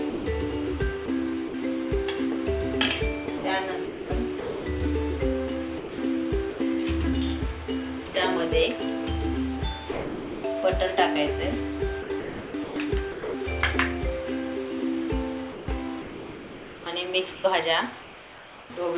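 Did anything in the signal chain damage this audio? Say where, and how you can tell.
Yes. The sound chopped by the voice detector appears at 0.1–1.54 s, 3.26–4.66 s, 5.78–6.6 s, 12.02–13.34 s and 15.52–18.7 s. In each stretch, parts of the sound are replaced by smooth synthetic hiss, about 240, 580, 300, 760 and 1800 ms in total. The damage likely happens at the call-processing stage: the sender's voice detector repeatedly toggled transmission off, and the receiver filled the gaps with comfort noise.

The sound dropped by the voice detector occurs at 8.08–8.14 s, a 60 ms loss, and at 9.92–10.44 s, a 520 ms loss. Here the sound does not flicker. It simply gives way to steady noise and returns only when the signal rises enough to retrigger transmission. The sender's detector likely judged the quieter passage to be background and stopped sending, and comfort noise stood in for the missing audio. 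The whole clip has nothing above 4 kHz, which fits the narrowband G.711 A-law codec on the call path.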